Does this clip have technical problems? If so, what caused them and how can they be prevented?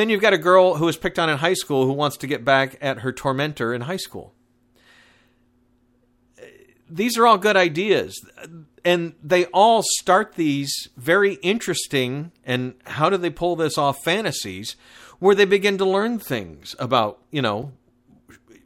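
Yes. At 17.63 s, just after "learn things about you", there is a block of digital silence. The playback or processing path most likely failed to fill one output buffer in time, so about 5.8 ms of samples came out as zeros, which fits a 256-sample buffer. The speech drops straight to zero and returns with no fade, and a gap this short is heard as a tick or dip rather than as silence. Preventing it means giving the audio thread enough headroom, through a larger buffer or lighter processing load, so every buffer is delivered before its deadline.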